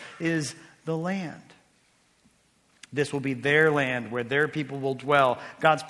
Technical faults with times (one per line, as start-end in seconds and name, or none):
0.00-5.90 resampler restarted on every block